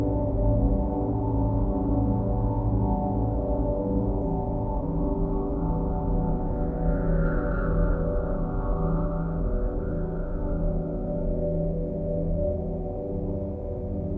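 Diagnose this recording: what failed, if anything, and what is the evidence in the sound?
A skip ahead at 4.22 s points to the network and jitter-buffer stage. Roughly a second of audio is gone, and the two sides join directly with no gap or fill. The audio was likely dropped in transit or discarded from the queue when the buffer overflowed, cutting delay by about a second.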